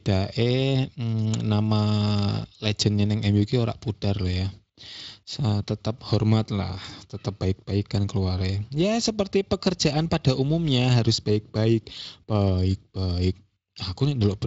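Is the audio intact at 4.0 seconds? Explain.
Yes, the audio is intact at 4.0 seconds, with no fault at that moment.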